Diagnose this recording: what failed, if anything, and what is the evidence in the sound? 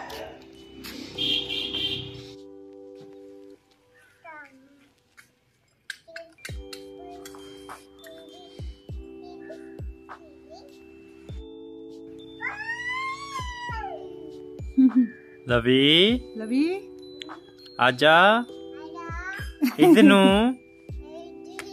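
Nothing failed: no stage from capture through playback leaves any audible defect anywhere in the recording.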